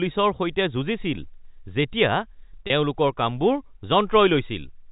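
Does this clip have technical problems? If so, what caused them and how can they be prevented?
Yes. At 2.67 s a 30 ms gap, consistent with three 10 ms packets, is filled by packet loss concealment with pitch repetition: the last pitch period loops briefly, giving a held, buzzy sound. A waveform shows identical repeated cycles, and a spectrogram shows frozen, evenly spaced harmonics. Jitter buffering and forward error correction would prevent this. The telephone-band G.711 coding caps the spectrum at 4 kHz.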